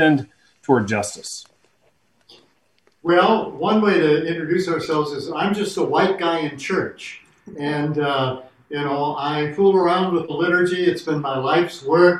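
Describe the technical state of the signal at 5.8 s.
At 5.8 s the signal is intact, with no audible fault at that moment.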